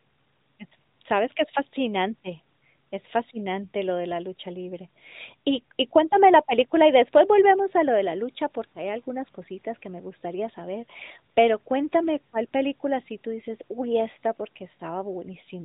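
No faults: the speech runs without defect, and its band-limited mobile-call character comes from the narrowband transmission path, not from a fault.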